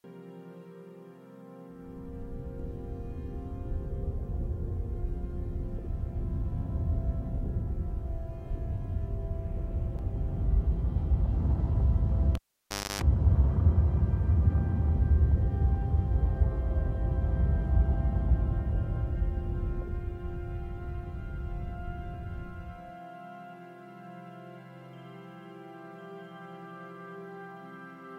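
At 12.35 s a pop cuts the sound to near silence for about 0.61 s, broken by a 0.29 s burst of 50 Hz mains buzz, and a second pop brings it back at 13.02 s: a live cable pulled and plugged in, buzzing while only the tip touched.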